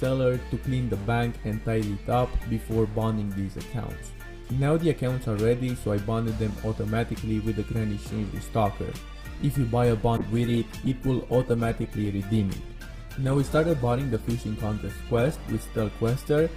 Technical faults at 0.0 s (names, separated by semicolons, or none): none